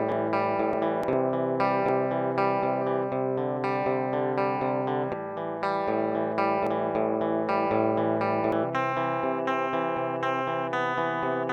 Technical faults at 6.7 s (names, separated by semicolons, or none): compressed frames skipped